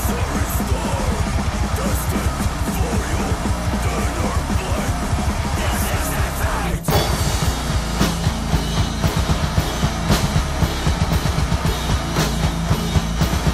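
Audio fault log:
throughout MP2 compression: the sound is dull and gurgling, with granular grit, plainly audible. A spectrogram shows upper sub-bands switching off and flickering in blocky steps. Starving Layer II's 32 bands of bits, likely at a rate around 80 kbps, would cause this.
11.36 s DAB burbling: a brief patch of burbling. Bit errors slipped past error correction and corrupted sub-band samples, putting short blips of noise in single bands. The spectrogram shows isolated bright band-shaped blotches, fitting a very low error rate under a tenth of a percent.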